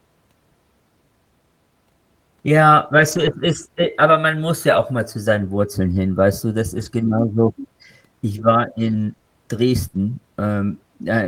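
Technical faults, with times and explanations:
3.07 to 9.97 s, scattered short gaps: about three brief holes in the speech, the longest around 70 ms, where packets arrived late or not at all. The receiver bridged each one by extending the preceding sound, so about 100 ms of missing audio is smoothed over across roughly 440 ms of rebuilt signal. The result is a small tick, smear or hiccup rather than silence. Because the holes are short, isolated and patched, this differs from a single long dropout or a steady crackle.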